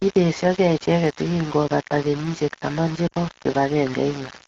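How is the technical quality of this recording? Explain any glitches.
The speech is heavily degraded by coarse quantization throughout, with one brief dropout near the end.

Across the whole recording the speech carries a harsh, grainy distortion whose error sits only about 15 dB below the signal. Because the grit tracks the speech and swells and shifts with it, rather than sitting as a steady hiss, the likely cause is low bit depth without dither. The coarseness fits roughly 4-bit resolution with plain rounding. Quiet syllable tails drop out or sputter instead of fading smoothly.

From 3.07 to 3.13 s, right after "kenyisyek taman che", there is a short drop to near silence of about 40 ms. This is lost AMR speech frames, consistent with two 20 ms frames failing. The decoder fills the gap by repeating the previous frame's pitch and spectral shape at reduced gain. Within the two frames the sound fades to near silence, and the following sound returns weak or rough for a moment. 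The AMR-WB wideband coding underneath adds only light coloration.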